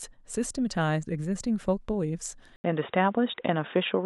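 At 2.56 s the speech drops out for about 80 ms, then returns dull and boxy until the end, with nothing above 3.8 kHz, a level shift of around 5 dB and a new background noise roughly 45 dB below the speech. This is most likely an input switched to a poorer device. On a spectrogram the energy above 3.8 kHz ends at a hard edge after a narrow blank gap, and the waveform shows a brief flat stretch and a step in amplitude.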